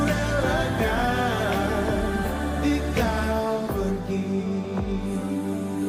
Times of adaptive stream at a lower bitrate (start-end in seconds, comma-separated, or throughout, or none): none